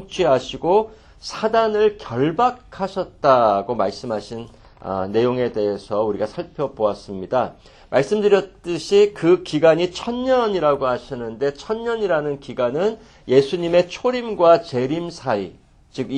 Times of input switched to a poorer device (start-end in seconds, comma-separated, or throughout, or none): none